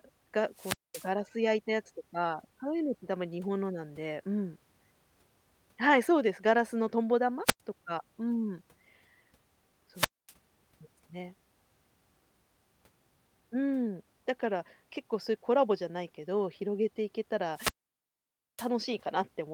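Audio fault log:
0.52–1.11 s, 7.45–7.61 s, 9.94–10.33 s, 17.53–18.71 s: wireless microphone squelch dropout. The radio link fades, hiss rises, then the receiver mutes for about 220, 100, 240 and 900 ms before speech returns.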